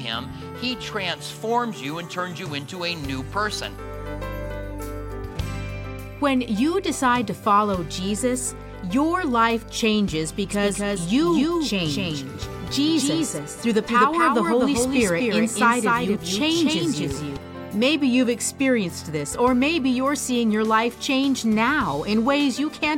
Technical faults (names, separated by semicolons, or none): doubled audio track